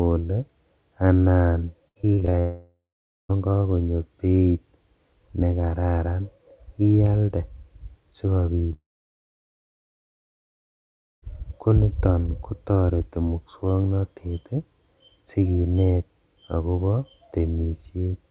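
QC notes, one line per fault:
1.88–2.35 s, repeated packet loss (robotic sound): six gaps, the longest 74 ms, patched by repeating prior audio, leaving a choppy texture; smeared, striped blocks on the spectrogram.
2.39–3.31 s and 8.73–11.24 s, long network dropout: the sound turns to a fading buzz, then goes silent for about 0.47 s and 2.4 s respectively, with 0.9 s and 2.5 s of audio gone, likely from lost network traffic; flat waveform gaps.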